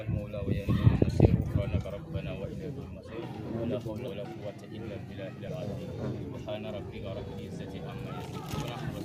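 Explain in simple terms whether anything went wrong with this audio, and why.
Compressed frames skipped, at 4.07 s and again from 5.47 to 5.50 s. At each point, a short stretch of the recording is simply missing, so the sound jumps ahead: about a tenth of a second at the first spot and roughly three tenths of a second at the second. Those gaps fit whole 20 ms chunks being dropped.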